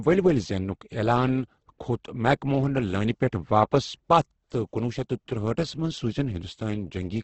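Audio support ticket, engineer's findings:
Speech rough and grainy throughout, harmonics smeared into noise. Spectrogram shows a hard ceiling at 8.2 kHz and speckled bands instead of clean harmonic lines. Likely heavy Opus compression in CELT mode, with starved bands filled by noise, consistent with roughly 12 kbps wideband.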